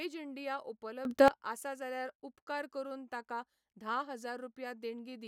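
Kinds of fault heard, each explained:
sudden gain jump: From 1.05 s to 1.28 s the speech and its background noise leap up together by about 18 dB, then fall back, with no ramp either way. The likely cause is a digital gain change applied instantly from one sample to the next.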